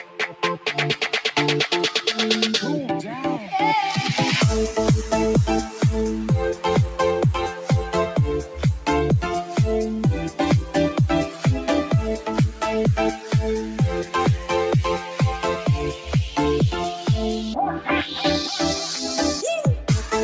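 Throughout the clip the level breathes and pumps by something like 5 dB: sharp onsets come through intact, while held tones and decaying tails sag and thin out. This comes from a noise suppressor applied to music or sounds. A processor built for speech treats sustained, steady material and reverberant decay as background noise and keeps pulling it down, so the sound flutters. The band stops at 8 kHz, which fits a G.722 call path.

In six places the sound cut by the noise suppressor drops below its surroundings: 0.0 to 0.69 s (about 10 dB down), 8.43 to 8.61 s (about 7 dB), 11.29 to 11.46 s (about 5 dB), 13.17 to 13.34 s (about 7 dB), 14.99 to 15.18 s (about 4 dB) and 15.92 to 16.12 s (about 8 dB). Each of these sounds like a brief hollow dip or a clipped tail, where the suppressor judged the passage to be noise and attenuated it harder than the rest.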